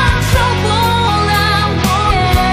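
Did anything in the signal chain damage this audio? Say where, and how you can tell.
Yes. The damage sits at the codec or storage stage: the compressed stream contains damaged data, so the decoder misread the frames there, lost sync and had to hunt for the next valid frame header. The sound shows it as two brief, unnatural blips, one at 1.07 s and another from 2.09 to 2.11 s. Each is a short glitch, which points to corrupted bytes inside compressed frames.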